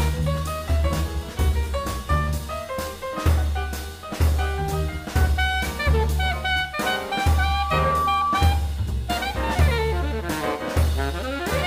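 At 7.09 s a single steady tone near 1.2 kHz appears and swells over about a second into a squeal, peaking at roughly the same loudness as the surrounding audio before it cuts off at 8.49 s. This is loudspeaker feedback squeal: a microphone picked up the loudspeaker it was feeding, and around 1.2 kHz the loop gain rose above one, so that frequency reinforced itself on each pass.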